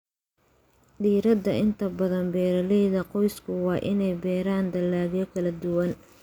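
Listening to the speech in this clip, nothing stood out as a technical problem.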